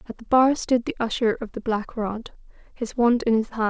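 No technical faults are audible.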